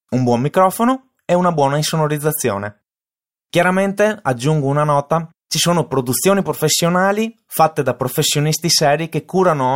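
No technical faults can be heard anywhere in this speech recording. At no point does anything in the signal chain stand out as having gone wrong.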